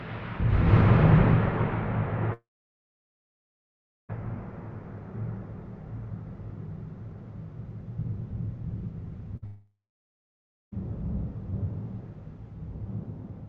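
Long network dropout, 2.33 to 4.11 s: the sound breaks into a brief fading continuation, then about 1.66 s of silence, and resumes roughly 1.76 s further on with that stretch gone. This fits a likely interruption in the stream, with the receiver extending the last sound until it gave up.

Burst of packet loss, 9.37 to 9.44 s: about 60 ms is missing. The receiver bridges the gap with a short, dimming continuation of the preceding sound, so it comes across as a quick smeared hiccup rather than a clean cut.

Long network dropout, 9.46 to 10.74 s, follows almost immediately. Again there is a short fade-out tail and then roughly 0.97 s of silence, and about 1.26 s of the audio never returns.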